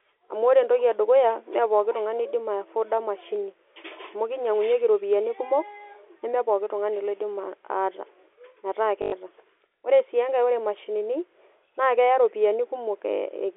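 At 9.02 to 9.12 s, packet loss with the last packet repeated replaces 100 ms of speech with a 50 Hz robotic stutter, consistent with five 20 ms packets.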